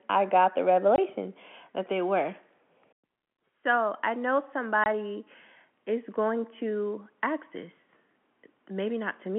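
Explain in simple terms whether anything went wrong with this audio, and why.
Two short holes of packet loss filled with silence break up the speech, at 0.96 to 0.98 s just after "I got the" and at 4.84 to 4.86 s just after "I know". Each gap lasts 20 ms, which fits a single lost packet that the receiver replaced with nothing. The sound stops dead and restarts at hard edges. A speaker's natural pause fades in and out, but these gaps are abrupt. The telephone-band sound of the G.711 line is not part of the fault.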